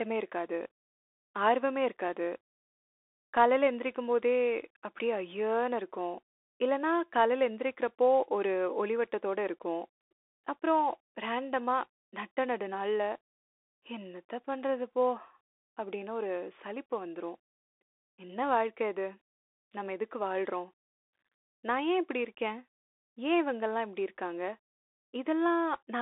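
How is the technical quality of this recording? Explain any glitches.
Poor: the speech has passed through a Bluetooth CVSD headset codec for the whole recording. Throughout, the sound is confined to roughly 300 Hz to 3.6 kHz, with nothing above 3.8 kHz. The one-bit, step-adapting coding, which fits a 64 kbps link, leaves a granular hiss underneath, scratchy s sounds, and plainly audible distortion where loud high content outruns the step size.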